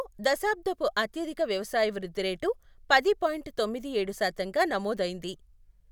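No technical faults can be heard at any point in the recording.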